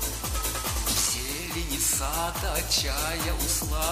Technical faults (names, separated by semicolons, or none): clock slip clicks